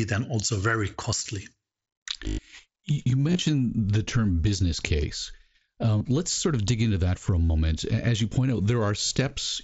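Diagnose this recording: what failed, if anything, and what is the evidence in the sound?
Buzzy, held-level patches replace the speech at 1.17, 2.28, 3.28, 5.98, 7.45 and 9.06 s. The longest is about 0.11 s at 2.28 s. This is concealed Bluetooth headset packet loss on the wireless link. Missing voice packets were filled by repeating the best-matching recent waveform.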